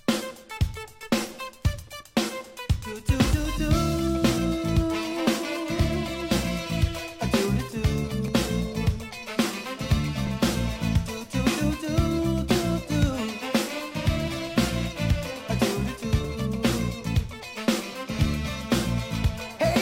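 Overlap between stream segments causes tiny skips at 6.31, 8.28, 10.27, 14.28 and 16.25 s. At each one, roughly 6 to 16 ms of sound is dropped where overlapping 2-second segment boundaries are trimmed.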